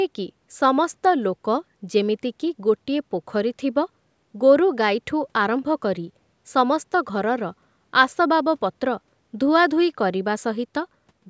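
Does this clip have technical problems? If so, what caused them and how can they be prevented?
No, the speech signal is technically sound; the call microphone processing it passed through is audible only as a band limit, with nothing above 8 kHz and the lowest bass removed by its high-pass filter, which is normal behaviour for that path.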